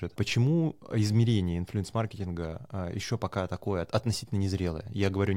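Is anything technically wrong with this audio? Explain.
No, there's nothing technically wrong here; this short bit of speech comes through without any problems worth pointing out.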